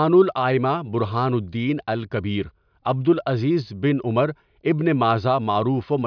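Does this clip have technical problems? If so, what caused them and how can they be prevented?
No, nothing technical goes wrong anywhere in this speech recording, so there's nothing here that needs preventing.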